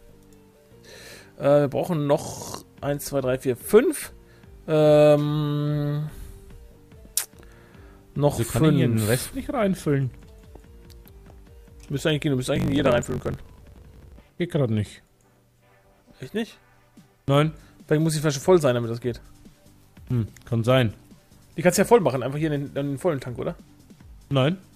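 From 12.54 to 14.38 s there's a truncated block size mismatch: block tails get dropped, fitting 1024-sample writes, giving a 50 Hz buzz and audio running 1.16 times fast at near-normal pitch.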